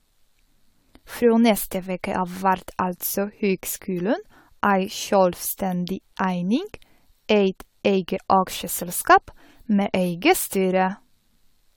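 From start to finish the speech has a swirling, hollow quality, with smeared consonant attacks and a watery shimmer that sounds worse than a single moderate-rate encode would. Nothing is present above 19.7 kHz. This is likely generation loss: the audio appears to have been encoded and decoded again around seven times, which fits a 96 kbit/s AAC-LC chain, each pass requantising on a shifted frame grid so that noise and spectral gaps accumulate.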